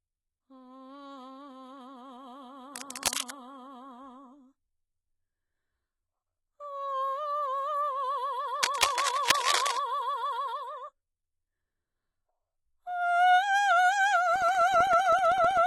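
Music, with damage across the whole clip. The treble stays bright but sounds false. Cymbal-like highs turn gritty and metallic, and upper harmonics fail to line up with the lower ones. The damage is heavy. The likely cause is HE-AAC compression at a very low bitrate, around 16 kbps. That codec codes only the lower spectrum. It copies those bands upward to fake the treble, shaped by a coarse envelope. There are two bursts of scratching and rustling over the music. The first runs from 2.74 to 3.31 s, a little below the music in level. The second runs from 8.63 to 9.79 s, roughly as loud as the music itself. Both have the dense, uneven texture of cable scratch noise. A worn cable, connector or control was likely moved, making its contact resistance jump about rapidly. Near the end, from 14.36 to 15.57 s, a steady train of ticks appears, about twenty in all. They repeat every 64 ms. Each is a tiny gap of silence, around half a millisecond, cut into the signal. 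This is the pattern of periodic USB or driver dropouts. A background task stalls the audio path at a fixed interval, and a sliver of sound is lost each time.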